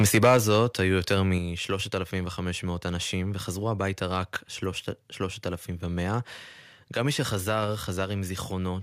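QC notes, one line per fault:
0.0–0.6 s, microphone overload: input gain was likely set too high, pushing peaks about 5 dB past the converter limit, so flattened tops crackle harshly.
0.37 s, 1.38 s, 8.04 s, microphone volume stepped down: software likely lowered input gain by about 3, 5 and 2 dB, so speech and background drop abruptly.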